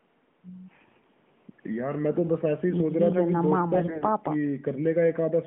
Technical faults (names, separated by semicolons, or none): AMR bit errors